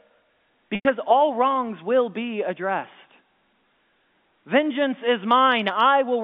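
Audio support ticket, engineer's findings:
Packet loss with pitch repetition, 0.75–0.85 s: 100 ms gap filled by a looped, fading last pitch period, heard as a buzzy hold. The spectrogram shows frozen harmonics inside the 150 Hz–3.6 kHz G.711 band, and the waveform shows identical cycles tapering.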